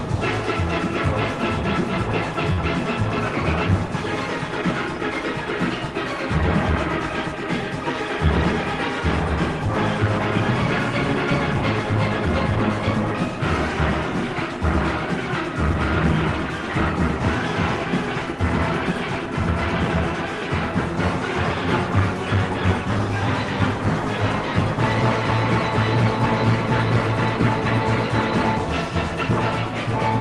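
At 2.53 s a packet arrived late and the jitter buffer ran dry, causing a short stall from a late packet: the receiver held the preceding sound for about 43 ms until 2.61 s, then resumed where it left off. Nothing is lost, but the playout shifts 43 ms later, and the stretched sound carries a slight buzz or dip within the call path's band, which stops at 12 kHz.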